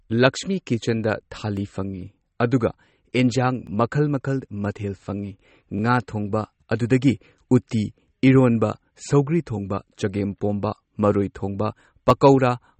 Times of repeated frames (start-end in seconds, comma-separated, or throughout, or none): none